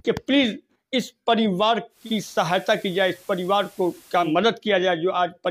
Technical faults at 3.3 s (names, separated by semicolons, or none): digital radio blending to analogue